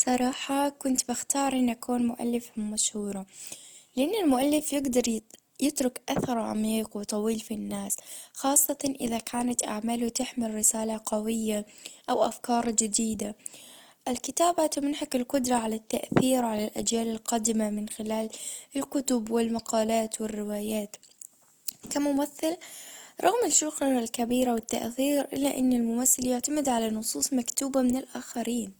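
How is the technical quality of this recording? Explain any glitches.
The recording has one clear technical problem: compression damage runs through the whole speech clip and is plainly audible from start to finish.

Opus compression, throughout: The speech sounds rough and grainy rather than swirly, with a noisy, sandy texture laid over voiced sounds. The likely cause is Opus in its music (CELT) mode at a low bitrate, about 24 kbps. At that rate the encoder keeps each band's overall energy but runs short of bits for fine detail, so it fills bands with folded copies of lower bands or with noise. That substitution is what makes harmonic sounds turn grainy. On a spectrogram the bandwidth stays full, with energy extending to about 20.2 kHz. There are few of the empty holes MP3 leaves, but the upper harmonics look smeared and speckled instead of forming clean lines. The waveform itself looks ordinary.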